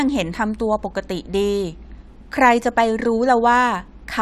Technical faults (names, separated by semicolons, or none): none